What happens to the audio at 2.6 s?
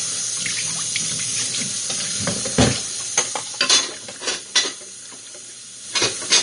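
Vorbis compression is audible at 2.6 s, as it is throughout the clip. Nothing is present above 10.6 kHz, and the remaining treble is grainy and hissy with roughened tones and softened attacks. This is likely a low-bitrate Vorbis encode, around 35 kbps, quantising fine detail into noise.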